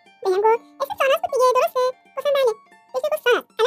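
The whole sound plays twice as fast and a full octave high, 12 semitones up: a wrong sample rate, which fits audio recorded near 22 kHz played back at 44.1 kHz without conversion.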